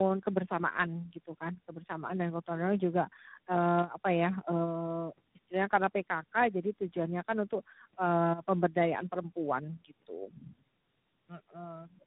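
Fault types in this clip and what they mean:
Tandem speech coding: repeated decode and re-encode through three speech codecs in a row, ending with G.726, leaves rough, muffled, warbly speech with nothing above 3.9 kHz.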